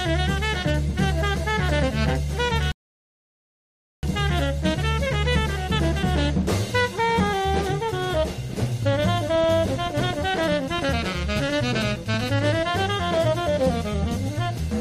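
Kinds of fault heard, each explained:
rebuffering stall: the sound drops to silence at 2.72 s for about 1.3 s, then picks up exactly where it stopped, as playback waited for more downloaded audio.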